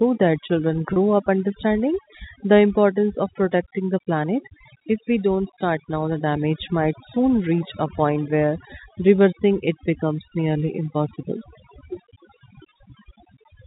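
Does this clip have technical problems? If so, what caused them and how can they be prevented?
Yes. Overdone noise removal runs throughout: an overly aggressive noise reducer cuts bands near its noise estimate, leaving near-silent gaps with twinkling specks. Prevent it by lowering the reduction strength or capturing a cleaner source.

Packet loss with pitch repetition occurs at 0.93 to 0.96 s. About 30 ms went missing, which fits three 10 ms packets, and the receiver repeated the last pitch period, producing a brief held, buzzy tone. Prevent it with a more stable network path or forward error correction. The G.711 telephone coding limits the band to below 4 kHz.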